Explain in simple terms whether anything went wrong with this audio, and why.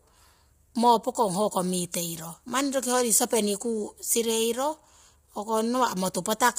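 The voice sounds rough and grainy from the first second to the last, with hiss filling the gaps between the tones of the voice and a top end that is dull, with nothing at all above about 15.6 kHz. The likely cause is heavy low-delay AAC compression, the kind used in video calls. It chops sound into very short slices to keep delay down, and squeezing it so hard leaves too little detail to capture the voice cleanly.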